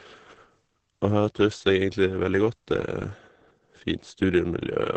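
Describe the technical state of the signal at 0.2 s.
At 0.2 s the speech carries heavy coding damage, present from start to end, most likely from Opus compression. The band stops sharply at about 8.6 kHz, which fits a wideband setting, and the sound is muffled and hoarse, the signature of the encoder's speech-oriented SILK mode. That mode models the voice with a low-rate predictive coder rather than preserving band energies, and the coarseness here points to a rate near 12 kbps.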